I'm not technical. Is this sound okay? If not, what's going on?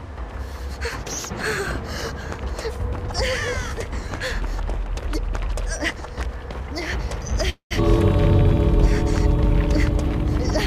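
No. At 7.49 to 7.73 s there's a call audio freeze, likely from data arriving late. The last sound stretches into a fading buzz, goes briefly silent, then resumes about 0.2 s late with nothing lost.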